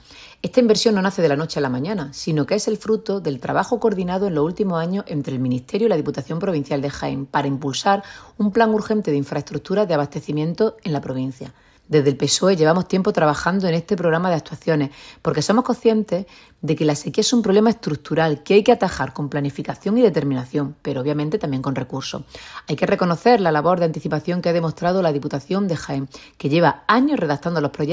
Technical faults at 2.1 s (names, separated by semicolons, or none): none